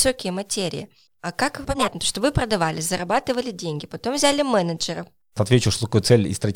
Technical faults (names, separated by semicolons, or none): corrupt frame decoded